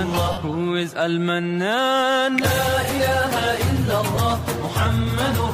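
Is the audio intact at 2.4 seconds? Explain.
No. At 2.38 s there is an electrical switching spike, a sharp snap lasting only a few milliseconds on top of the sound. It was likely caused by a nearby switch, motor or static discharge arcing briefly. The audio line picked up that burst.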